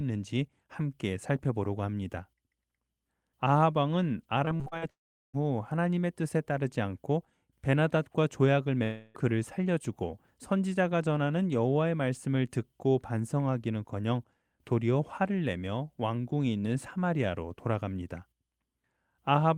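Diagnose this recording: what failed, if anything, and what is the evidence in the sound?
The network failed first with repeated packet loss (robotic sound) between 4.45 and 4.84 s. Five short holes, the longest 45 ms, were patched by stretching the previous sound, so about 42% of that span is concealment. Audio returns between the holes, which sets this apart from a full dropout.

Two long network dropouts follow, likely from the network stage. At 4.90 to 5.35 s about 0.44 s goes missing: a brief decaying continuation, then roughly 0.38 s of silence. At 8.83 to 9.17 s about 0.32 s is lost, filled entirely by a fading continuation with no silence. The sound then resumes without the missing part, which points to a dropout rather than muting.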